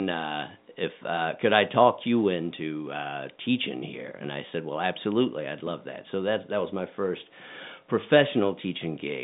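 Nothing's wrong with this one: it's speech carried over ordinary telephone coding, with the narrow band you'd expect from a phone line, and there's no technical fault to point to.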